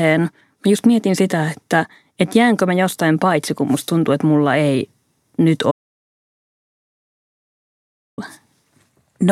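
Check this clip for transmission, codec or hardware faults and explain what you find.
One fault turns up in the speech. An audio dropout to silence runs from 5.71 s to 8.18 s. The input was likely lost, say a disconnected device or failed link, while writing continued. The speech stops mid-flow into about 2.5 s of dead silence, with no room tone, then resumes.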